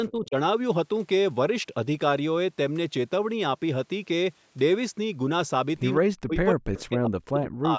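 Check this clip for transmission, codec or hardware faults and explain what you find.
Two faults are audible: speech suppressed in double talk, and a brief echo leak.

Speech suppressed in double talk occurs from 0.09 to 0.35 s, 5.96 to 6.34 s, and 6.53 s to the end. The level dips by roughly 15 dB early on and by about 40 dB later, likely because the echo canceller mistook overlapping far-end speech for echo and attenuated both. The voice thins and drops out in pieces. On a waveform these are sudden envelope collapses, and on a spectrogram they are darkened vertical bands, near-blank in the later, deeper dips.

An echo leak appears at 6.77 to 6.81 s. A faint copy of the voice arrives 157 ms late at about 20 dB below the speech, likely residual loudspeaker pickup that the canceller failed to remove. On a spectrogram it shows as a weak repeat of the preceding harmonics.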